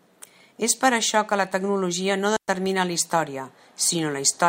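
At 2.37 s a digital wireless dropout cuts the speech to near silence for about 114 ms, ending at 2.48 s. The receiver lost too much data and muted with a quick fade, leaving no noise burst on either side.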